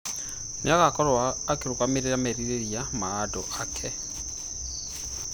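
Nothing in this bit of speech stands out as a technical fault, so there's nothing here to point to.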